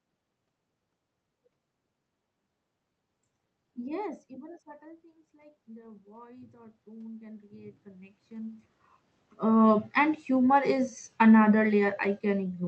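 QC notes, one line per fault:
4.79–8.71 s, automatic gain rising: the input dropped by about 19 dB as the talker moved back, and the gain control then slowly added about 8 dB. Voice and room noise swell together, so the waveform envelope and the spectrogram's noise floor climb in step.
10.56–12.68 s, automatic gain falling: the gain control judged the input too loud or its background noise too strong and lowered its gain gradually, so the sound sinks to the end together with the room noise. The waveform envelope tapers, and the whole spectrogram, noise floor included, dims uniformly.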